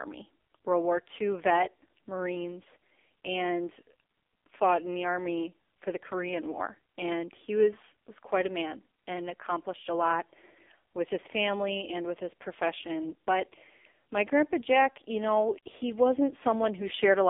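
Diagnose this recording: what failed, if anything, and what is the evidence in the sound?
The failure is at the codec stage: the whole recording has passed through the AMR narrowband mobile codec. Nothing survives above 3.7 kHz, and the low end thins out below about 250 Hz, giving a phone-line band of roughly 250 Hz to 3.6 kHz. A plain band-limiting filter would leave the speech natural, only muffled. Here the voice is buzzy and synthetic throughout, the heavy damage of a vocal-tract model driven by too few pulses, which fits a low mode near 5.9 kbps.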